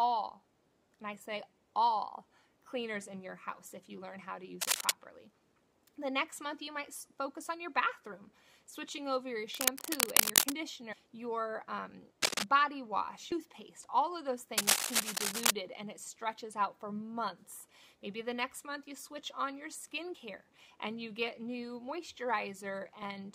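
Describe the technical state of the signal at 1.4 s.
At 1.4 s the audio is intact, with no dropout, click, distortion or other fault audible at that moment.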